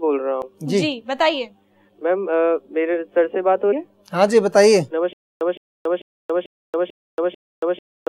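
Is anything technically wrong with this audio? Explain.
Yes, there are two kinds of fault.

At 0.42 s and again at 3.72 s there is damaged data in the compressed stream. Corrupted bytes make the decoder misread a frame, lose sync and search for the next header. Each spot comes out as a brief glitch.

From 5.13 s to the end there is a stutter with silent gaps, likely from the player or stream stalling and retrying. Each retry replays the same 164 ms fragment, then drops into 279 ms of digital silence. This repeats every 443 ms, six times, and the audio meant for that stretch is lost.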